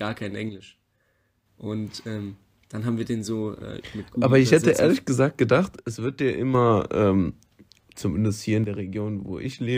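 A stereo channel likely drops out three times, and once the pair is summed to mono only half the signal remains. The speech falls abruptly by about 6 dB from 0.49 to 1.46 s, again from 5.79 to 6.55 s right after "hätte ehrlich gesagt gedacht", and from 8.64 s after "zumindest hier in" until the clip ends. Each one channel drops out event sounds like a sudden duck in loudness, and the first two snap back just as sharply.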